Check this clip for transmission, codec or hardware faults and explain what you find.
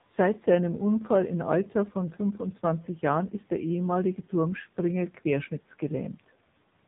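One codec fault affects the whole clip.

AMR narrowband mobile codec, throughout: the speech passed through an 8 kHz mobile coder that rebuilds it from a vocal-tract model and sparse pulses, so nothing above 3.8 kHz remains. The heavy buzzy, synthetic texture fits a low mode around 6.7 kbps.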